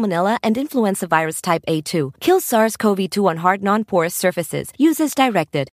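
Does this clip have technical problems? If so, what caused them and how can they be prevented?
No, this clip has no technical problems, so there is nothing to prevent.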